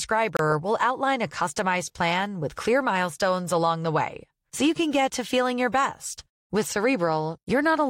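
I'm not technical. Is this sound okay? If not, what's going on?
No. At 0.37 to 0.39 s the speech cuts to silence for about 26 ms, then carries on. That's a Bluetooth stall: most likely radio interference delayed the wireless data, so the headphones briefly ran out of audio to play.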